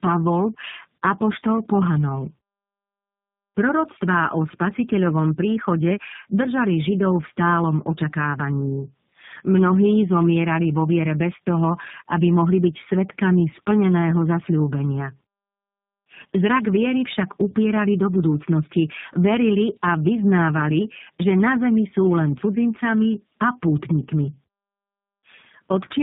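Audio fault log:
throughout: tandem speech coding. The speech crossed three separately coded links in a row, decoded and re-encoded at each border, and the final stage fits a low-rate G.729A coder at 8 kbit/s. Each coder worked from the previous one's already damaged output, so the errors stacked. The voice sounds rough, muffled and warbly, more degraded than any single link would leave it, with nothing above 3.8 kHz.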